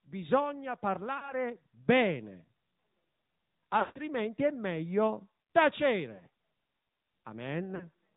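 Throughout, the speech sounds boxed-in and buzzy, with nothing above 4 kHz and a synthetic edge. This is the AMR narrowband mobile codec, which rebuilds the voice from a vocal-tract model and a few pulses, plainly audible here at a mid rate that fits AMR-NB's 10.2 kbps mode.

Brief warbling dips at 1.18 s, 6.16 s and 7.76 s, and a longer smeared fade from 3.80 to 4.00 s just before "è meglio", are lost AMR speech frames. The decoder repeated the last good settings with falling gain, over 40 ms gaps and one 160 ms run.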